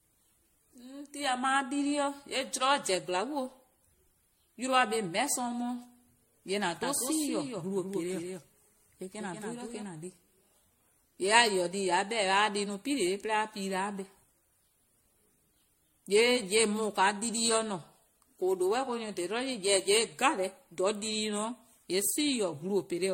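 Throughout, generation loss, likely from repeated MP3 re-encoding at around 62 kbit/s, leaves the speech swirly, hollow and smeared. The spectrogram looks speckled with holes and is empty above 16.5 kHz.

From 6.83 to 9.83 s, a doubled audio track, likely from a second capture path, adds a dry copy about 5 dB quieter, trailing by roughly 200 ms. The waveform shows shifted repeats that begin and end abruptly.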